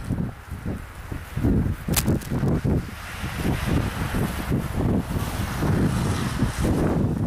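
From 1.92 to 2.56 s, cable scratch noise about 10 dB below the signal rustles over the sound, likely from a worn connector moving, showing dense broadband specks and ragged waveform spikes.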